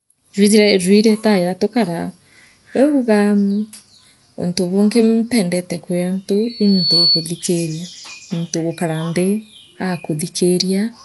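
From the start and through the whole clip the speech has a dull, band-limited sound with nothing above 11.4 kHz, and a rough, fluttering noise clings to voiced sounds. That points to likely Dolby Digital compression at a low rate, around 64 kbps: the encoder has narrowed the band and left many frequency lines without mantissa bits, so the decoder fills them with dither noise. The flutter tracks the speech rather than hissing steadily, which separates it from ordinary broadband noise.

At 6.49 s, right after "bungi mpendete kwi antu", a loudspeaker feedback squeal begins. A single 4.4 kHz tone swells over about half a second until it sits roughly 5 dB above the speech, then stops at 7.33 s. The microphone was picking up its own loudspeaker, and at that frequency the loop gain exceeded one, so the tone kept feeding itself. Unlike a steady interfering whistle, it grows from nothing and dominates the signal once it has built up.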